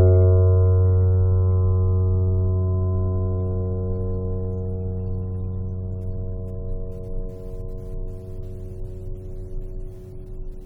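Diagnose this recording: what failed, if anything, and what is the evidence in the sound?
Nothing in the signal chain has failed: the music arrives intact, with no audible defect introduced at any stage between capture and playback.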